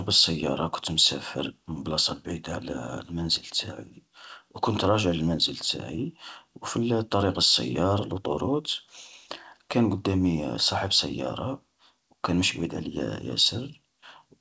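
There are no technical faults in this speech to describe in time order, and the WebRTC call path carries it with nothing above 8 kHz, as that path is set up to do.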